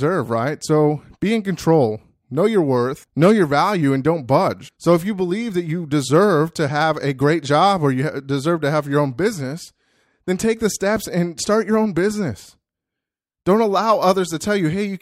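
No technical faults can be heard anywhere in this speech recording. There are no events to place on a timeline.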